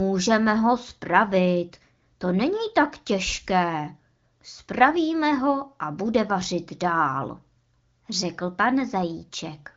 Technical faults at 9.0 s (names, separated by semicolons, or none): none